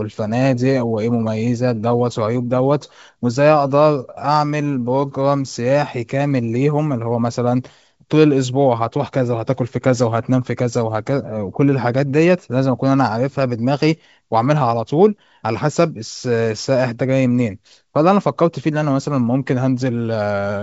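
No faults: the speech comes through G.722 wideband coding at 64 kbit/s, with nothing above about 7.7 kHz.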